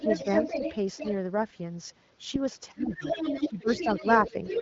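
Right from the start, 0.0 to 0.73 s, there's a second voice under the talker, about as loud as the talker. That's the other side's voice leaking through, most likely far-end audio from the loudspeaker that the echo canceller didn't fully cancel before it reached the mic. In that same opening stretch, 0.0 to 0.05 s, the talker dips briefly by a few dB. It comes back fainter, about 10 dB down, from 0.97 to 1.11 s, then returns at 2.8 s and runs to the end, about 5 dB under the talker.

The dips are likely speech suppressed in double talk. With both sides going at once, the canceller can't tell the talker from the echo, so it pulls the whole signal down. The first is the shallow one at 0.0 to 0.05 s. The heavier ones are at 2.71 to 3.04 s and 3.45 to 4.05 s, where the talker drops as much as about 15 dB and sounds ducked while the leaked voice carries on. A last short duck lands at 4.31 to 4.35 s. 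All of this sits on top of a wideband AMR-WB call, with nothing above about 7.6 kHz.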